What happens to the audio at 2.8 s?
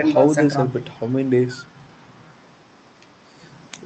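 Nothing goes wrong at 2.8 s: the speech passes through intact, carrying only the ordinary band-limited character of the call codec path.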